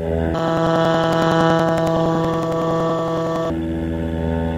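Planar audio read as interleaved runs from 0.34 to 3.50 s. Each 93 ms block holds all left samples then all right, but is read as alternating pairs. So each block plays twice at double speed, pushing the sound an octave high with a 10.8 Hz flutter.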